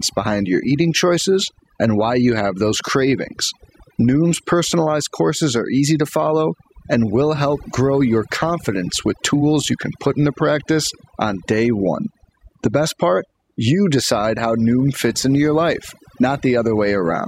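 Overdone noise removal runs through the whole clip. A noise reduction stage was pushed too hard. It cuts individual frequency bands deeply whenever their level sits close to its noise estimate. The background between phrases drops. Scattered twinkling specks are left behind. Softer parts of the speech fall below the threshold and get stripped out too.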